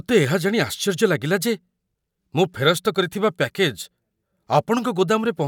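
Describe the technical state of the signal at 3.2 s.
The signal at 3.2 s is intact, with no audible fault at that moment.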